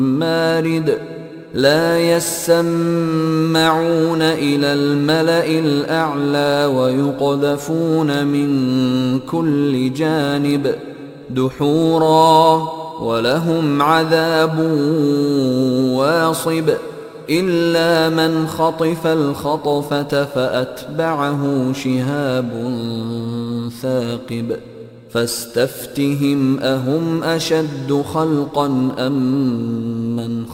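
A gritty, inharmonic fizz rides on louder and brighter passages throughout, pointing to crude rate conversion, 44.1 kHz to 48 kHz by repeating samples, with errors roughly 30 dB down.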